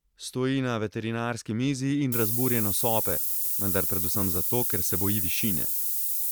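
From 2.12 s, right after "na veterinarski mizi in", to the end at 6.31 s, the speech drops to low bit depth with noise shaping. Only 4 bits remain, and the rounding error is pushed upward, so a thin, steady hiss about as loud as the speech climbs sharply toward the top. A spectrogram shows a dense noise wash thickening at high frequencies, and the waveform looks coarse and fuzzy.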